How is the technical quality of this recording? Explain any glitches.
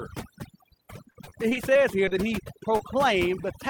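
The technical quality is poor. Heavy processing runs through the whole recording, and the middle and end carry several network glitches.

Overdone noise removal is present from start to finish. The noise reducer was set too strong. It pushes down any frequency band that sits near its noise estimate, and soft parts of the speech are cut along with the noise. The background drops and breaks up into twinkling specks.

From 1.11 to 2.13 s there is repeated packet loss, which gives a robotic sound. Audio went missing eight times in this span. Each hole was patched by carrying the last sound forward. The patches add up to 140 ms, about 14 percent of the stretch, and the longest is 32 ms. The speech turns choppy, with small pieces gone.

A jitter buffer slow-down overlaps that stretch, from 1.69 to 2.30 s. The receiver was building up a reserve, so it repeated single pitch cycles and bits of pause. 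That added 55 ms. Speech runs at 92 percent speed with the pitch unchanged. Sounds are drawn out.

At 2.77 to 2.81 s there is a short concealed packet loss. About 20 ms of audio never arrived in time. The receiver filled the hole by continuing the last sound, then blended back into the real signal. It comes through as a brief smear or wobble.

At 3.41 to 3.45 s a short stall from a late packet occurs. A packet was not ready when it was due, and the buffer ran empty. The receiver held the last sound for 18 ms until the packet arrived, then carried on from the same point. Nothing is lost, and the delay grows by 18 ms. One sound is held slightly too long, with a faint buzz or dip.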